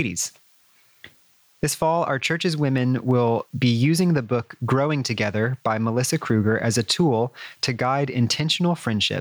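It's a speech clip with gain pumping running through the whole thing: the level keeps ducking and recovering, swinging by roughly 20 dB, so loud and quiet stretches end up squashed together. That likely comes from input gain set far too high, with a fast limiter or compressor clamping down on every loud moment.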